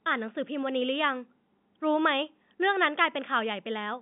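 Speech carried over a telephone line, with nothing technically wrong with it.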